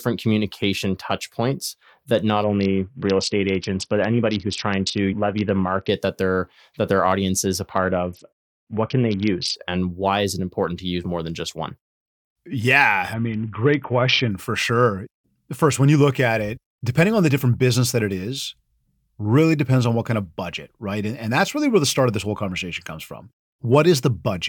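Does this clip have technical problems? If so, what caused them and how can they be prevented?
Yes. A Bluetooth SBC bit pool drop hits this speech three times: 2.44 to 5.89 s (after "touch points that not"), 7.78 to 9.56 s (after "their audience is a"), and 13.14 to 14.31 s (before "for sure"). The treble dulls and gritty noise rises, which points to the bit pool falling from 31 to about 6, near 55 kbps. The upper sub-bands get few or no bits and the rest are coarsely quantised. Reducing radio congestion and interference keeps the link at full bit pool.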